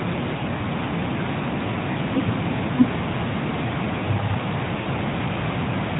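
At 0.38 to 0.42 s and 1.92 to 1.95 s, brief warbling dips in the speech mark lost AMR speech frames, each fitting a single 20 ms frame that failed its checksum. The decoder filled the gap by repeating the last good pitch and vocal tract settings at reduced gain. At 4.82 to 4.87 s a longer smear, consistent with two frames, drawn out and fading, follows the same pattern over the light narrowband coloration. Unlike a plain dropout, the gaps are never silent.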